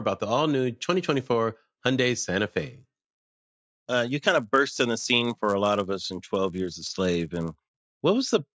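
From 2.57 s to 7.96 s the speech carries a 100 Hz buzz, the signature of a resampler restarted on every block. Each 10 ms block was converted on its own, likely in a downsampling step such as 48 kHz to 16 kHz, so each block edge leaves a small discontinuity. Unlike mains hum, which keeps going through pauses, this buzz appears only while sound is present and drops out in the gaps.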